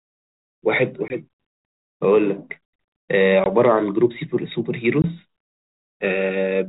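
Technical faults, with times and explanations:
1.08–1.15 s, 3.44–3.50 s and 5.02–5.04 s: packet loss on an ADPCM call. Each 20 ms gap of silence, about one packet, desynchronises the decoder's predictor and step size, so speech resumes with brief distortion.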